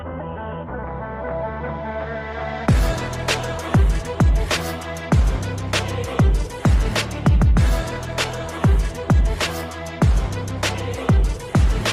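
A skip ahead at 0.83 to 0.85 s: around 0.4 s of audio was dropped in transit or by an overflowing jitter buffer, so playback jumps forward with no gap.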